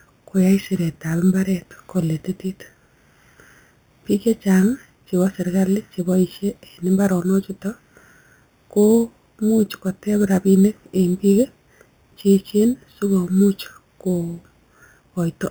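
Speech with imaging from sample-and-hold upsampling throughout: a metallic fizz follows the voice, mirrored into 4–8 kHz about 23 dB down, which fits 8 kHz audio repeated up without smoothing.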